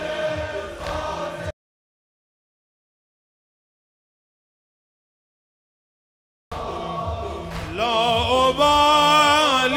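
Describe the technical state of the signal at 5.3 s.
At 5.3 s the signal is in an audio dropout to silence, running from 1.51 s to 6.51 s. The input was likely lost while recording continued, so about 5 s are written as silence. The gap is dead silent, with no room tone.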